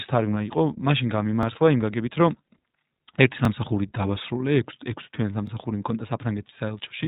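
Speech passes through the iLBC codec, and the whole clip is band-limited, with the spectrogram ending flat near 3.8 kHz. The coding damage is plainly audible as a rough, synthetic quality, which fits iLBC's 20 ms frame mode at 15.2 kbps. Overlapping chunks produce stutter clicks at 1.43, 3.45 and 5.47 s, about 2 s apart. At each join roughly 21 ms of audio repeats, visible as a duplicated waveform segment with a discontinuity.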